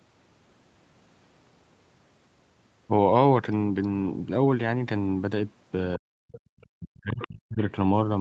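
From 5.96 to 6.18 s and again from 6.7 to 7.6 s the speech dips sharply, by around 40 dB at its deepest. This is speech suppressed in double talk, likely an echo canceller that could not separate the talker from loudspeaker echo and attenuated both. At 6.32 to 6.4 s, 6.61 to 6.66 s and 7.21 to 7.27 s, brief scraps of a second voice break through, roughly 15 to 35 dB below the speech. This is the other side's voice leaking through, likely residual loudspeaker echo that the canceller failed to remove from the microphone signal. All of it sits within the call path's 8 kHz bandwidth.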